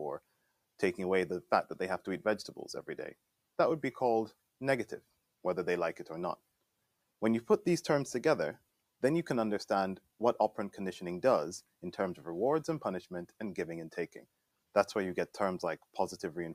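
Between 0.2 and 0.8 s the sound is cut by the noise suppressor: it sinks by up to about 18 dB, with roughly 0.4 s affected, as the suppressor treats it as background and pulls it down. The same happens from 14.15 to 14.75 s, about 18 dB again, affecting roughly 0.3 s. Unlike a dropout or gate, the level dips rather than vanishing, and it is steady or decaying sound that fades while abrupt onsets survive.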